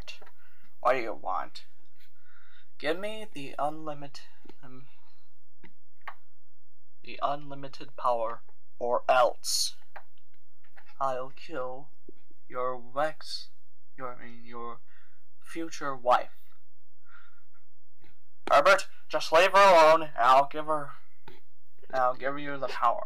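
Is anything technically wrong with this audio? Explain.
Yes, there's a DC offset running through the whole clip. The entire waveform sits shifted off the zero line by a constant amount, about -29 dBFS. You won't actually hear it as a sound, since it's just a steady push in one direction. It still eats into headroom on that side, so peaks clip sooner, and on an analyser it appears as a fixed lump of energy right at the bottom of the spectrum.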